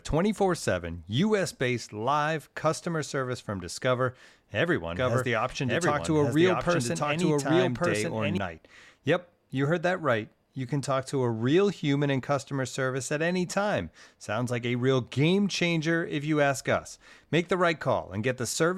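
From 4.96 to 8.38 s the speech is heard twice at once: a second, equally loud, full-band copy trails about a second behind, dry and without decay, cutting in and out abruptly. This doubled audio track likely comes from a slower second capture path.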